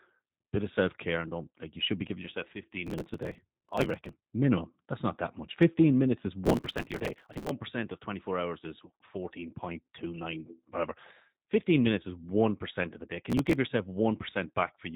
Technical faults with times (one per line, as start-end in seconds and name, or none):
0.00-14.95 G.729 codec
2.87-4.22 processor overload crackle
6.45-7.51 processor overload crackle
13.30-13.55 processor overload crackle